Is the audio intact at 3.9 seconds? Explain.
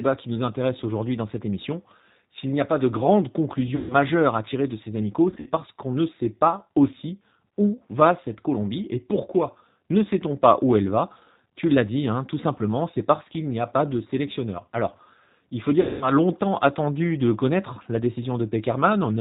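No, 3.9 s sits inside a VoIP packet loss concealed by the speech codec, from 3.76 to 3.95 s. About 140 ms went missing, and the decoder stretched its last pitch and filter into a fading buzzy tone or coloured noise. The whole clip also runs through the G.729 codec at 8 kbit/s, so the speech is rough and synthetic with no energy above 4 kHz.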